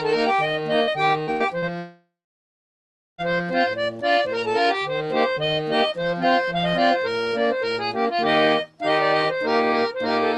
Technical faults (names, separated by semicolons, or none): repeated packet loss (robotic sound); long network dropout